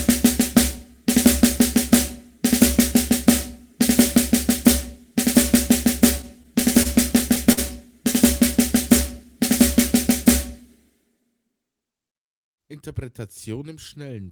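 From 6.21 to 7.59 s, repeated stalls (stutter): seven brief holds, the longest 50 ms, stretch the sound rather than dropping any, unlike packet loss gaps.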